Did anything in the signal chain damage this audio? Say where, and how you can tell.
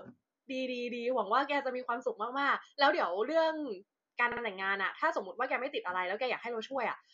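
Yes. Repeated frames occur in the speech from 4.31 to 4.42 s, damage at the codec or storage stage. A block about 52 ms long plays again twice, so the same fragment is heard as a short stutter. The pattern suggests a couple of compressed frames written or delivered more than once, which stretches the clip by about 105 ms.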